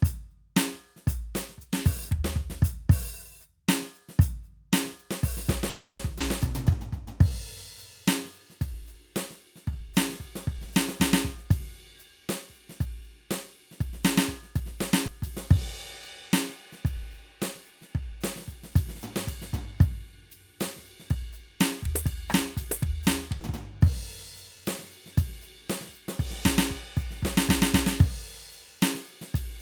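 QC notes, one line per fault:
5.69–6.01 s, call audio freeze: packets were likely held up in transit and the jitter buffer ran dry, so the receiver stretched the last sound into a fading fill for about 300 ms, ending in roughly 50 ms of silence. The music then resumes where it stopped, with nothing lost but a 300 ms pause inserted.
6.19–6.22 s, 15.07–15.10 s, 23.40–23.43 s, skip ahead: a stretch of audio was discarded while later packets were already queued, so playback jumps forward with only a brief 10 ms join. Roughly 150 ms, 100 ms and 70 ms of music vanish, and the two sides butt together almost directly.
6.71–10.65 s, 15.55–18.72 s, 23.85–24.62 s, jitter buffer slow-down: with its reserve running low, the buffer repeated single pitch periods over and over to rebuild it, adding 102 ms, 95 ms and 47 ms. The music plays at 98%, 97% and 95% speed at unchanged pitch, so the tempo drags and sustained tones are drawn out.
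11.35–14.72 s, 21.15–23.03 s, jitter buffer speed-up: the buffer held more audio than its target, so it cut out short pitch-period slices repeatedly, removing roughly 70 ms and 100 ms. The music runs at 102% and 106% speed at the same pitch, and the tempo loses its steadiness, with the 106% run sounding hurried.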